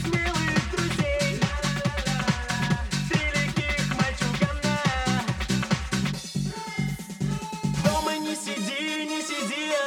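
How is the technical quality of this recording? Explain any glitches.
The recording has a single fault that runs its whole length. Channel delay (comb filtering), throughout: one channel arrives around 5 ms late, and summing to mono cancels shared content at regularly spaced frequencies, from around 100 Hz upward. The result is a hollow, phasey sound with fixed spectral notches.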